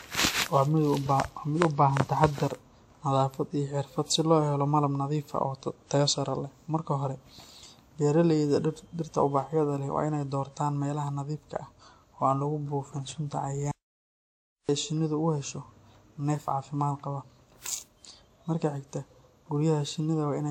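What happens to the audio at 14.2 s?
At 14.2 s the sound is in an audio dropout to silence running from 13.71 to 14.69 s: about 0.97 s of silence, likely from lost input, with no room tone. Throughout, including around this gap, generation loss from repeated lossy re-encoding gives a smeared, hollow, swirly character with nothing above 18.1 kHz. This is likely around seven passes, consistent with a 96 kbit/s WMA-type codec.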